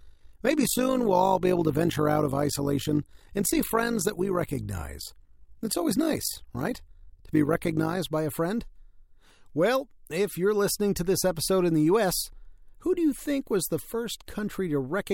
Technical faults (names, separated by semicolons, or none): overlap-add ripple